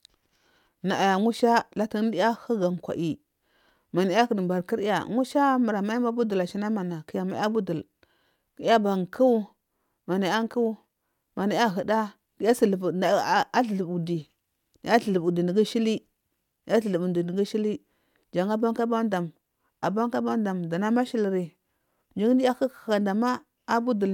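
Speech recording in which no technical fault can be heard at any point in the signal.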